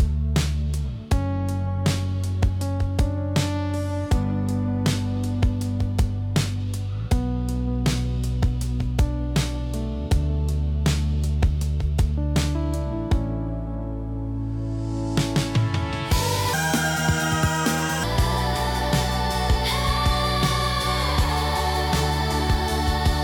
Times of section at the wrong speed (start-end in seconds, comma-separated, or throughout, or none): 16.53-18.04